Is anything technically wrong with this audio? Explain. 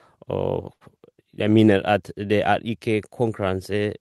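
Yes, there is a short stall from a late packet at 0.73 to 0.83 s, just before "jeg mener at". A packet arrived late, the jitter buffer ran dry, and the receiver stretched the preceding speech by about 74 ms before resuming. Nothing is lost, but one sound is held unnaturally long with a slight buzz or dip, and everything afterward runs about 74 ms later.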